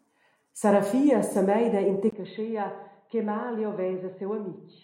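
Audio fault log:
2.10 to 4.83 s, input switched to a poorer device: after a 20 ms gap at 2.10 s, the speech turns dull and boxy for the rest of the clip, drops about 10 dB in level, and picks up a new background noise floor sitting roughly 45 dB below the voice. Nothing remains above 4.2 kHz. The likely cause is the recording input changing mid-take to a narrower-band microphone or headset call profile with its own tone, gain and noise.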